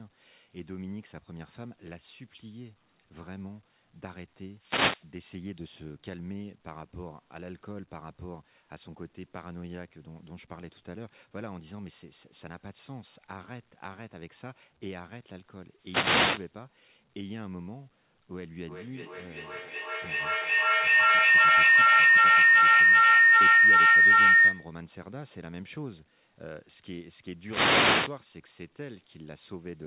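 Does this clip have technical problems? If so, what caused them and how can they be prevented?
Yes. Two devices in the same room were on the call, so sound from one loudspeaker re-entered the other's microphone and gained level on every trip through the loop. From 18.37 s to 24.85 s this becomes a feedback howl: the repeats grow rather than fade, narrowing to a tone of around 2 kHz that peaks about 18 dB above the speech and pulses roughly every 0.4 s, the loop's delay. The call path's cut-off at 4 kHz fits a G.711 A-law codec. To prevent the howl, mute all but one device's microphone and loudspeaker when joining from a shared room.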